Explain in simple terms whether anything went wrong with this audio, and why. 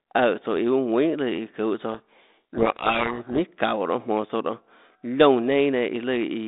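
Something did go wrong, for about a second and a half. Right after "çuhå tsouã", from 1.92 s to 3.39 s, the speech gets buried under harsh, grinding distortion. That's a codec payload misread: the phone-style G.726 coding on this line packs each little code word in a set bit order, and the receiving end read those bits back to front. The code words decoded into the wrong values, giving rough noise instead of clean speech until both ends lined up again.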